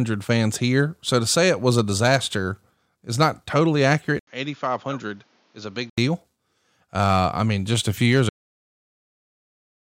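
Right after "disaster is not totally", at 4.19 s, there's a gap of about 80 ms, and then the sound turns dull and boxy, with nothing above 7 kHz. It drops roughly 10 dB in level, with a new hiss sitting around 30 dB under it. That lasts until 5.98 s. It's most likely an input switched to a poorer device, maybe a headset's call profile, before the original mic comes back.

Then there's a cut-off end at 8.29 s, just after "just a few years". The sound stops mid-syllable and falls straight to digital silence with no natural decay, because the final buffers never got written out.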